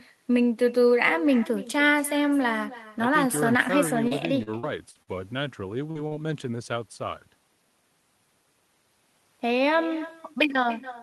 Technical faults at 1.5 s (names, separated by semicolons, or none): echo with no canceller